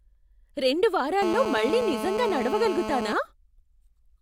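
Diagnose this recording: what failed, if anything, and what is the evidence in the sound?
A GSM phone buzz enters at the analogue wiring stage from 1.22 to 3.13 s: a hard, raspy 217 Hz buzz at about -6 dB relative to the speech, held steady as during a call. A nearby 2G handset's bursts are rectified by the audio circuitry. Unlike smoother 50 or 60 Hz mains hum, it is harsh and harmonic-dense.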